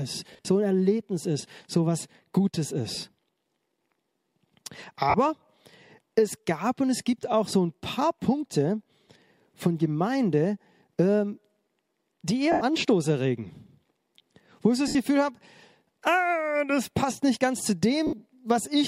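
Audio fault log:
0.31 to 18.14 s, lost LE Audio frames: dropouts at 0.31–0.45, 2.95–2.97, 5.10–5.14, 7.22, 9.08, 12.52–12.61, 14.88–14.95 and 18.07–18.14 s. Each gap is 10 to 100 ms long, and the first is scattered across 140 ms in short bursts. The decoder fills each gap by repeating the last spectrum with scrambled phase, so tones blur into a brief noisy smear instead of the hard click or clean silence of a plain dropout.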